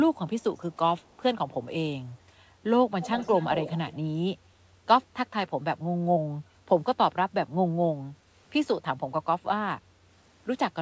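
Speech carried over a call path, band-limited at 8 kHz in a way that fits a wideband codec such as G.722, with two kinds of fault. A delayed copy of the voice trails the talker by 182 ms, first as a brief, very faint scrap at 1.11 to 1.15 s, far below the speech, then much more plainly from 3.01 to 3.94 s, only about 10 dB under the direct voice. This is likely an echo leak: the far end appears to be on a loudspeaker, and its echo canceller let part of what its microphone picked up return down the line. At 8.13 to 8.27 s the room background dips by up to about 13 dB for roughly 150 ms and then recovers. That is background gated by the echo canceller, which clamped the microphone gain hard while the loudspeaker was active and released it once playback stopped.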